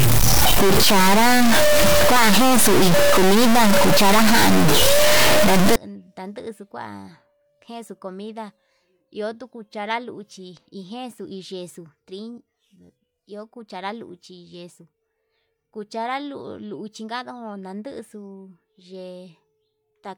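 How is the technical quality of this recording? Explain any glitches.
The opening stretch is damaged; the rest of the recording isn't described here. From 0 to 5.76 s, a stuck bit is the likely cause: one data line held fixed, shifting about half the samples by a step of roughly -10 dBFS. The speech turns harsh and buzzy, and the pauses fill with loud noise.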